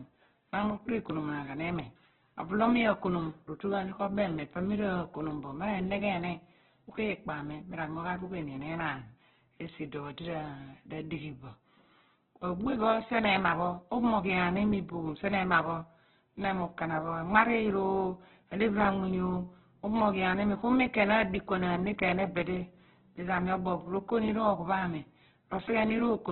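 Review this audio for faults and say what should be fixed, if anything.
Opus compression runs throughout the speech. Nothing survives above about 4.1 kHz, and the speech sounds dull, rough and grainy, likely from a very low bitrate near 8 kbps, where starved bands get filled with noise. On a spectrogram there is a hard ceiling at 4.1 kHz over speckled, smeared harmonics.

To prevent it, encode at a much higher bitrate or keep a lossless master.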